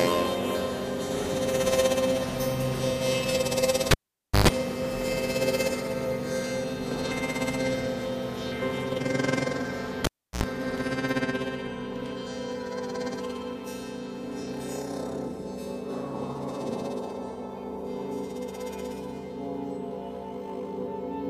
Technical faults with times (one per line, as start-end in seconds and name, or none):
3.91-4.48 cable pulled and plugged in
10.04-10.44 cable pulled and plugged in